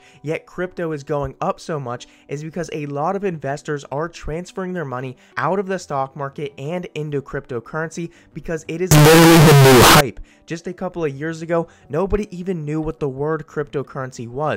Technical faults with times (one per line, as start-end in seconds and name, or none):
8.91-10.01 float read as integer